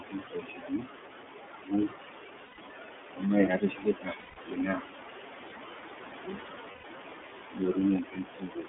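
Noise suppressor artifacts run through the whole clip. The suppressor pulls down whatever bands it judges to be steady noise by about 20 dB, so the room noise, which sits only about 9 dB below the speech, drops away in pauses and swells back under syllables. What remains of it flutters and warbles, and the speech takes on a thin, watery edge.

iLBC codec coloration is also present from start to finish. The line passes only about 250 Hz to 3.5 kHz, leaving the speech boxy and dull. The codec models each 30 ms block independently, and at a rate that fits its 13.33 kbps mode the speech comes through intelligible but plainly rough and synthetic.

Speech cut by the noise suppressor first appears from 0.00 to 0.89 s, where the suppressor mistakes quieter speech for background and turns it down with the noise, by as much as about 21 dB. Soft consonants and word endings sound swallowed or faint, over roughly a second in total.

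The same speech cut by the noise suppressor returns from 1.49 to 1.96 s, again reaching about 21 dB of loss. Here around a third of a second of speech sinks with the background.

Lost iLBC frames at 2.46 to 2.59 s leave a 120 ms gap, consistent with four frames missing. The decoder fills it by repeating the last pitch cycle blended with noise, so it sounds like a held, faintly buzzy vowel. Normal speech resumes almost immediately after the gap.

Speech cut by the noise suppressor spans 3.11 to 4.84 s, with drops of up to about 21 dB, affecting roughly a second of speech that comes through muffled and swallowed.

Lost iLBC frames fall inside that stretch, from 4.19 to 4.39 s. This 180 ms gap points to six missing frames, and the concealment is a longer held buzzy tone that fades before the speech snaps back.

Speech cut by the noise suppressor comes next from 5.96 to 6.43 s, with the deepest drop in the clip at about 22 dB. 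About a third of a second of quiet speech is pushed down under the background.

Lost iLBC frames occur again at 6.71 to 6.85 s, a 120 ms gap that again fits four frames. It produces the same brief breathy, sustained vowel before clean recovery.

Speech cut by the noise suppressor runs from 7.54 s to the end, reaching about 21 dB of loss. Around a second of speech there sounds faint, with its word endings clipped away.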